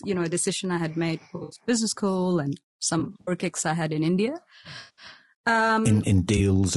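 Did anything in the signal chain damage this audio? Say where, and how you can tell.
Yes. At the codec stage, the speech sounds rough and grainy throughout, with noise filling the gaps between harmonics and a thin, synthetic-sounding top band. This is likely low-delay AAC compression (AAC-ELD), whose short frames resolve pitch poorly, at a rate that fits roughly 32 kbps.

Across the network or transport stage, AAC frame loss with concealment produces smeared, phasey patches at 1.35–1.59 s, 2.99–3.31 s, 4.79–5.05 s and 6.37–6.40 s. The decoder fills each gap from the last good spectrum. It hides 140 ms, 140 ms, 180 ms and 20 ms of loss respectively, with runs of up to around 70 ms in the first two.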